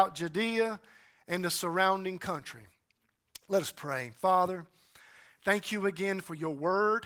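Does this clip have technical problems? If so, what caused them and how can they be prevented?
No, nothing here needs fixing: the Opus voice compression, running in hybrid mode at 20 kbps, is working as intended, so there is nothing to prevent.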